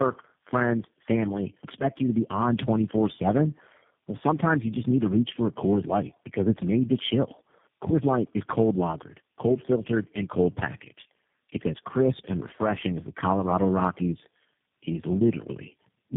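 Tandem speech coding runs through the whole of this speech recording. The voice sounds rough, muffled and warbly, with nothing above about 3.7 kHz. That pattern points to four low-rate speech codecs in a row, with a GSM full-rate coder, another GSM stage, AMR-NB and finally G.729A, joined by G.711 links. Each border decodes and re-encodes the signal, so every coder compounds the previous one's damage.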